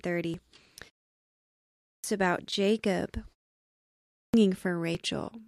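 Right at 0.34 s there's a quick jump where the speech skips ahead, with no gap, just a splice. That's most likely a dropped buffer (overrun): the software didn't read its samples before the hardware overwrote them, so roughly 20 ms vanished and the two sides butted together. The same skip comes back at 2.39 s and 4.95 s, each time a small chunk lost mid-flow.

Between those, there's a clipped start after a pause. After a 0.74 s gap, the speech picks up abruptly with no proper onset because the output device was still waking or relocking, swallowing about 0.48 s from 1.56 to 2.04 s. It happens again after a 0.63 s pause, eating about 0.46 s from 3.88 to 4.34 s.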